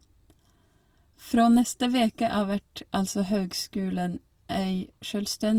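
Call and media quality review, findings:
Speech grainy and rough across the whole clip, tonal parts turned noisy, without swirling holes. Likely Opus compression in CELT music mode, bands filled with noise or folded content when bits run short; damage plainly audible, consistent with roughly 24 kbps fullband.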